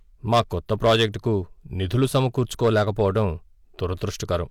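Hard clipping runs through the whole speech clip: the signal was pushed about 9 dB past what a stage could pass, so around one percent of samples had their peaks cut flat, adding high harmonics heard as distortion on the loudest moments.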